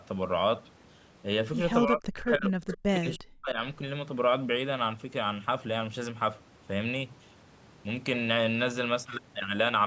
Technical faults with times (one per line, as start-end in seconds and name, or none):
1.85-3.60 speech suppressed in double talk
2.27-2.31 echo leak
2.67-2.75 echo leak